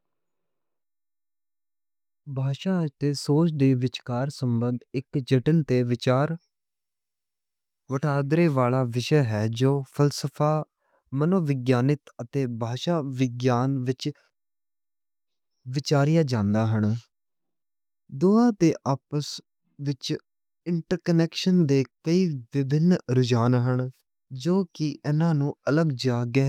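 No technical faults can be heard anywhere in the speech.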